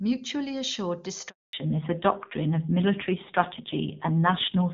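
At 1.29 s there's a handover gap: the call hops networks, no speech frames make it through the switch, and the sound drops out almost instantly, leaving about 240 ms of dead silence until the new link picks up at 1.53 s.

From 1.53 s to the end you get a fallback to narrowband. The clear HD Voice sound of the opening, which fits AMR-WB at a high rate, gives way to audio with nothing above 4 kHz, so it's duller and rougher, which fits a low-rate AMR-NB mode around 5.9 kbit/s.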